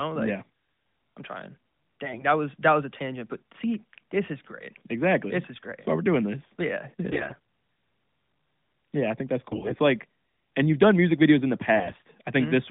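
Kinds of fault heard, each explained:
AMR bit errors: Over a weak mobile link, the less protected bits of the AMR-NB frames arrived flipped while the check on the key bits still passed. The decoder therefore placed its excitation pulses wrongly and used slightly wrong pitch, gain and spectral values. The speech keeps its pitch and level but turns hoarse and gargly in four short bursts: at 2.04 s, at 7.10 s after "yeah yeah", at 9.50 s after "I think that's", and at 11.76 s. The last three are rougher.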